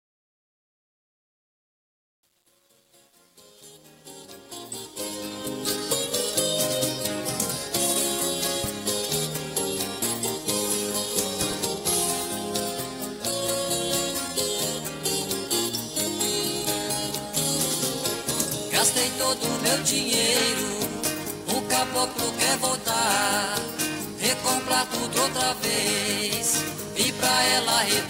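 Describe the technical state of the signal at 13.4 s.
At 13.4 s the signal is intact, with no audible fault at that moment.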